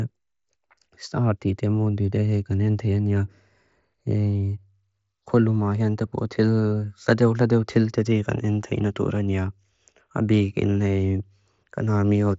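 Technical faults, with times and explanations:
Nothing here counts as a fault, just speech coming over what sounds like a wideband Bluetooth mSBC headset codec link, with the top end stopping at about 7.7 kHz, as that path normally does.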